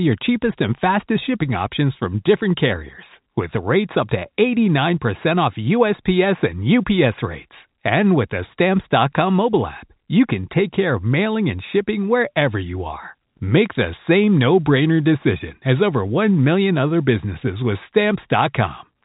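No technical faults are audible.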